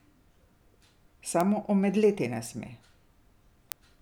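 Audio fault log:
1.41 s, 2.46 s and 3.72 s: bit error spikes. Each is a single sharp tick, only a sample or two wide, that peaks at about -9, -21 and -3 dBFS. The abrupt power-of-two jump and return spreads energy across the whole spectrum, unrelated to the speech.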